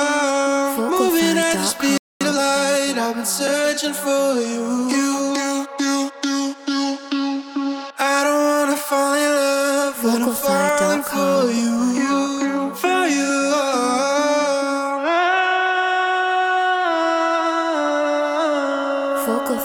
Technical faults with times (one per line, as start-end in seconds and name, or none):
1.98-2.21 playback stall
2.21-2.43 time-compressed catch-up